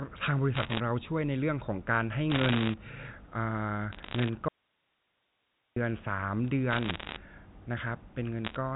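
Speech over a narrowband phone line, with everything above 4 kHz gone as you'd expect from G.711 mu-law coding, and two separate problems riding on top. Bit errors on the digital phone line show up as short bursts of sharp ticks and crackle at 0.54 to 0.80 s, 2.30 to 2.74 s, 3.93 to 4.29 s, 6.71 to 7.16 s and 8.45 to 8.56 s. Each flipped bit corrupts a single sample, and the bursts sound like an error rate of around one percent. Then at 4.48 s the signal drops out abruptly to a faint residue of hiss roughly 40 dB down, and it snaps back at 5.76 s after about 1.28 s. The likely cause is a break in the signal ahead of a path that stayed live.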